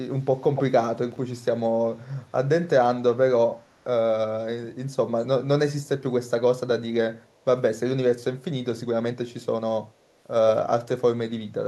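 Speech clip with two faults. An echo leak gives delayed copies, 286 ms late, at 0.54–0.63 s (nearly as loud as the speech), then faintly at 1.36–1.41, 3.58–3.84 and 7.22–7.26 s. The likely cause is a far-end speakerphone echo canceller letting sound through. Chunks out of order jumble 1.12–1.18 s: a 20 ms piece plays two chunks late.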